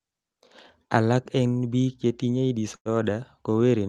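At 2.75–2.88 s, a call audio freeze stretches the speech into a fading buzz, then 80 ms of silence: a smeared band and blank spectrogram gap, likely from delayed packets.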